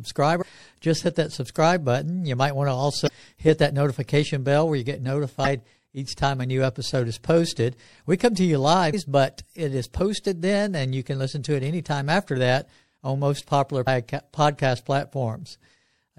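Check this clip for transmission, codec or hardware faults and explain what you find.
Two kinds of fault are present: codec damage through the whole recording and two brief stream errors.

Throughout the speech, the sound is plainly degraded. Quiet detail flickers in and out, giving a watery, swirly texture. S sounds turn metallic and chirpy. Consonant onsets smear. The likely cause is MP3 compression at a low rate, which fits roughly 64 kbps. Short of bits, the encoder zeroes weak frequency lines, which switch on and off from frame to frame.

Damaged data in a compressed stream appears twice, at 3.05 to 3.09 s and at 13.83 to 13.87 s. Each event is a short squawk or blip. Corrupted bytes there make the decoder misread or reject frames. It loses sync and hunts for the next valid frame header. The brief burst of garbled output is what you hear.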